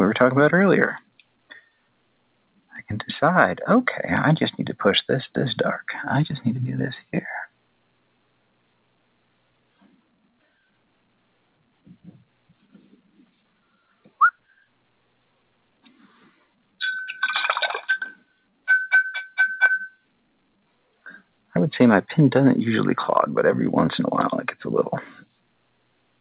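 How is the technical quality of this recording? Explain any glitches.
Two glitches stand out. The audio also carries the narrow band of a telephone-style call path, with nothing above 4 kHz.

At 2.76 s there is a bit error spike. A single sample had one bit flipped, so its value jumped by a power of two and snapped straight back. It comes through as one sharp, broadband tick that has nothing to do with the sound around it.

Between 15.95 and 16.35 s the sound is cut by the noise suppressor. The suppressor mistook part of the sound for noise and pulled it down by up to about 7 dB. For roughly a fifth of a second, the level sinks before recovering.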